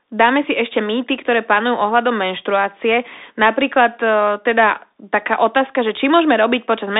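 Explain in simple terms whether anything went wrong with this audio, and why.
The speech went through a Bluetooth CVSD headset codec from start to finish. This narrow link sends sound as tiny up-or-down steps. Only about 250 Hz to 3.7 kHz gets through, so it sounds thin and boxy, with scratchy s sounds and gritty hiss underneath.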